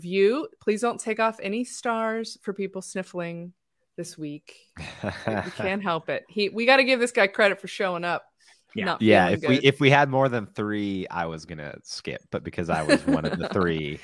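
No technical faults are audible.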